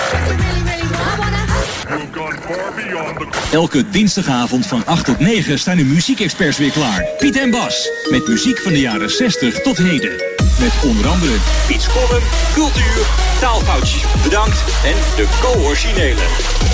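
Nothing's actually wrong here; the sound simply comes through a wideband call path with nothing above about 8 kHz, which fits a G.722 link at 64 kbps.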